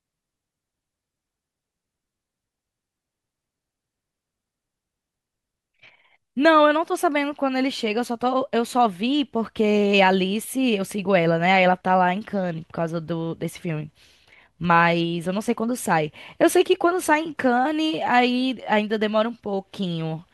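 Speech recording, no technical faults detected anywhere in the clip.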